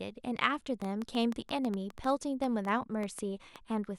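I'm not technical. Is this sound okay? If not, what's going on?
No. From 0.82 s to 3.57 s the speech carries a train of clicks: about fifteen sharp ticks, roughly six per second, arriving at an uneven pace and sounding alike each time. They are loud enough to stand out clearly above the speech and can be heard in the gaps as well. Something is adding brief pulses to the signal, most likely electrical interference from nearby equipment or a faulty connection or power supply.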